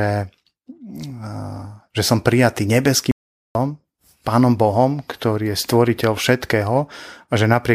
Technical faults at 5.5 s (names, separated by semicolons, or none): none